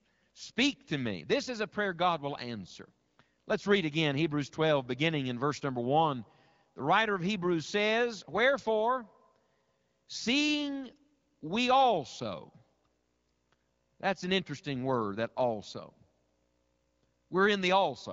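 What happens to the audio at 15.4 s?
Nothing goes wrong at 15.4 s: the speech carries on intact through that moment, with the light, band-limited sound of AMR wideband (HD Voice) coding at 12.65 kbit/s and no break or added damage.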